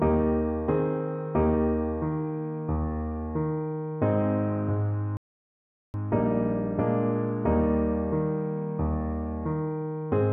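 At 5.17 s the sound cuts out abruptly and stays silent for about 0.77 s, resuming at 5.94 s. This is a playback stall: the player likely ran short of data or had its thread blocked, so output halted until it recovered.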